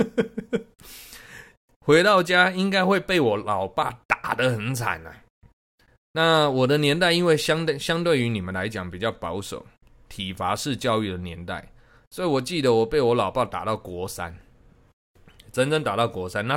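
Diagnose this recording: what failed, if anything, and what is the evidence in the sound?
Nothing failed: there is no evidence in the sound of a fault at any stage of this recording.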